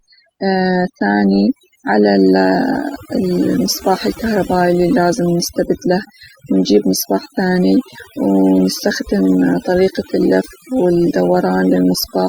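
A speech clip with overdone noise removal throughout: between phrases the background drops to near silence flecked with twinkling specks. A spectrogram shows scattered isolated dots in gaps and ragged, hollowed-out bands where quiet speech energy was cut.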